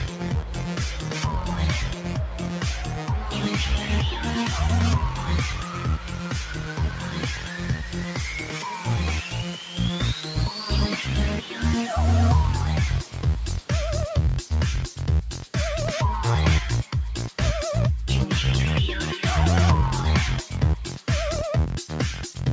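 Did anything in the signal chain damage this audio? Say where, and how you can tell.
Yes. The damage happens at the call processing stage. A speech-tuned noise suppressor was applied to music or sounds and stayed on for the whole clip. Level swings by around 10 dB as it reacts. Sudden onsets come through, but held, steady material and decaying tails get pulled down. That gives a pumping, thinned-out quality. The suppressor is reading sustained tones and ambience as background noise and attenuating them.

There are also spots of sound cut by the noise suppressor. They fall at 0.08 to 0.26 s, 1.93 to 2.12 s, 5.6 to 6.29 s, 6.49 to 8.19 s, 8.42 to 8.88 s, 9.26 to 9.78 s, 11.41 to 11.57 s, and 15.34 to 15.55 s. Each dips by about 5 to 7 dB. The longest stretch runs from 6.49 to 8.19 s. In these spots, sustained or fading sound sinks and its decay is cut short.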